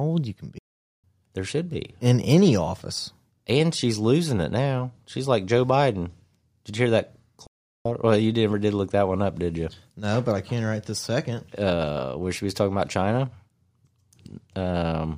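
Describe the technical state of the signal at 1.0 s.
At 1.0 s the speech is caught in a playback stall. The output goes silent at 0.58 s, just after "old you can", and stays silent until 1.04 s. That is a gap of about 0.45 s. The speech halts in mid-flow, then resumes. The likely cause is the player running short of data, or its output thread being blocked, so nothing reached the output until it recovered.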